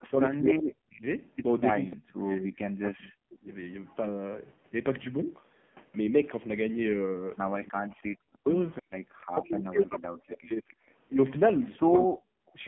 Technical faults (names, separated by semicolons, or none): AMR narrowband mobile codec; speech suppressed in double talk